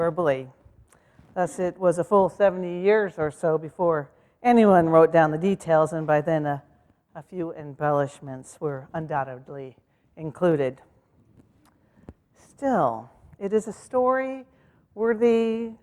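No technical faults are audible.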